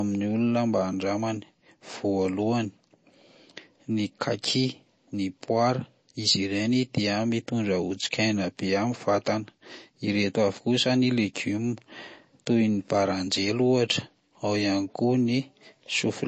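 From start to finish the speech carries what is likely MP3 compression: nothing survives above about 8.3 kHz, and the weak high-frequency detail that remains keeps flickering in and out, giving s sounds a watery, swirling edge with metallic chirps. The damage is plainly audible and fits a low bitrate around 32 kbps. A simple low-pass filter would only dull the top end, but here the band below the cut-off also churns unsteadily.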